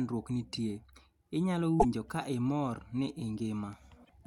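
A speech recording with two short bursts of damaged data in the compressed stream, at 1.77 to 1.85 s and 4.01 to 4.10 s. Each time the decoder misreads corrupt frames and resyncs, producing a brief glitch. On a spectrogram these appear as abrupt broadband smears; the waveform shows a discontinuity.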